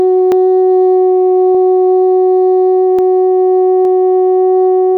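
Dropped buffer (overrun) at 0.32, 1.55, 2.99 and 3.85 s: the music skips ahead by about 10 to 30 milliseconds, likely because samples were overwritten before being collected.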